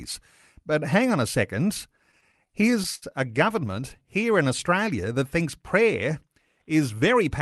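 A speech recording over a call link shows repeated stalls (stutter) in two stretches. From 2.11 to 3.04 s the sound catches nine times, and the longest hold is 70 ms. Then from 3.60 to 3.97 s there are five brief catches of about 12 ms or less. Packets reached the receiver late, so its jitter buffer kept running dry. The receiver stretched the last sound to bridge each gap. Nothing is lost, but delivery drags and stammers.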